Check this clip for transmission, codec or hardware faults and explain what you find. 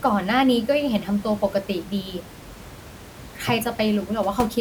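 Nothing stood out on listening to the speech; the only thing heard besides it is the room's own background noise, sitting about 18 dB below the speech as part of the recording.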